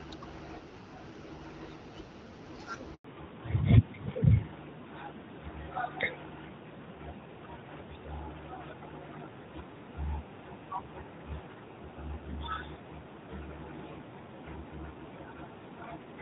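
At 2.94 s the speech cuts out for 100 ms in a handover gap: the call changed networks and no frames arrived. It is clean silence, not concealment's smeared repetition. From 3.04 s onward the call shows fallback to narrowband. The codec switched down, so everything above 4 kHz is gone and the voice turns duller. It stays that way rather than recovering, which is what separates it from a brief dip. Before the switch, the light coding of the wideband stage fits an AMR-WB HD Voice link at around 12.65 kbit/s.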